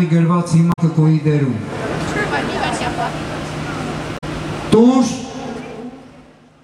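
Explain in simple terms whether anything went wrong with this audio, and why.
Two short glitches stand out, at 0.69 to 0.79 s and again at 4.14 to 4.24 s. Both come from damaged data in a compressed stream: a bit of the file got scrambled, so the player stumbled and skipped to the next clean chunk.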